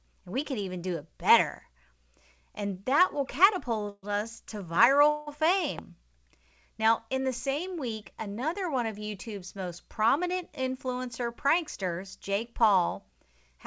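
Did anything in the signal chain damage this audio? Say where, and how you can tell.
Yes. Call audio freeze at 3.89–4.05 s, just before "us to", and 5.09–5.29 s, just after it. The sound stretches into a fading buzz, likely from late network packets draining the jitter buffer.

Loud pop at 5.79–5.81 s: one sharp click roughly 15 dB above the sound, which continues underneath. This is likely a voltage step in the analogue wiring or driver.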